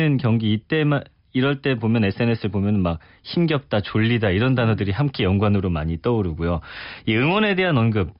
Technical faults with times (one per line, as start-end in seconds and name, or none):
none